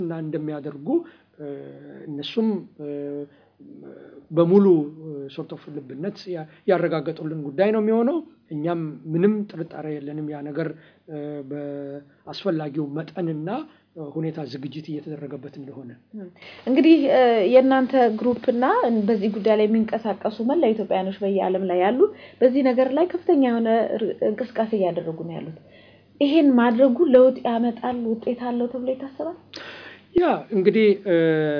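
No technical faults are audible anywhere in the clip.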